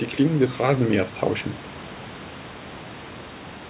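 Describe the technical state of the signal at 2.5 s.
At 2.5 s the speech is intact, with nothing wrong at that point beyond the room noise sitting about 20 dB below the voice and the call codec's normal band limit, which leaves nothing above 4 kHz.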